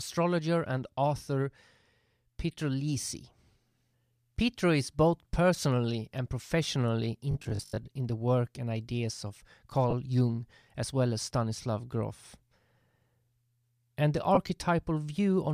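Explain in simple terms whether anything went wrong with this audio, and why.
Two kinds of trouble show up in this speech clip.

From 7.31 to 7.89 s the speech turns into a stiff, metallic buzz. This is robotic sound from repeated short buffers. The buzz sits at 50 Hz, which fits a tiny 20 ms piece of sound being played over and over. About half of that stretch is repeats, with real sound skipped. The likely cause is new audio arriving too slowly, so the player filled the gaps with copies.

Twice the sound briefly smears into a noisy hiss: from 9.90 to 9.93 s, and from 14.34 to 14.38 s. These are lost LE Audio frames. Each gap is about 22.5 ms long, which fits three 7.5 ms Bluetooth frames going missing. The receiver covered each hole with a rough copy of the last sound it had. The gaps are short, so you hear a quick grainy blur rather than silence. The Bluetooth link itself likely uses its normal LC3 compression, which gives only a light grainy edge.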